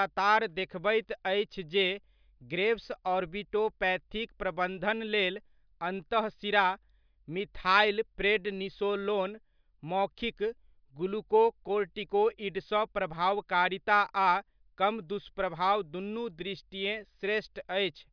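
No technical faults can be heard in this speech recording. Nothing in it calls for a timestamp or further comment.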